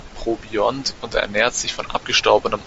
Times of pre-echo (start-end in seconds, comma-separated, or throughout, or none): none